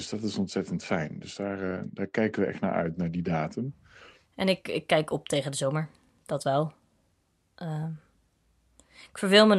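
Speech recording, with no technical faults to be heard.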